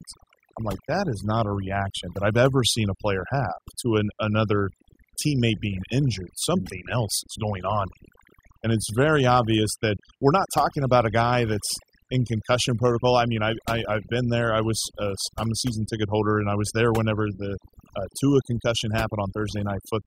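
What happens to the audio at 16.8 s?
At 16.8 s the speech is under overdone noise removal, which runs through the whole clip. The over-strong suppressor drops frequency bands it takes for noise, so the background goes near silent with twinkling specks, unlike a plain low-pass's steady dullness.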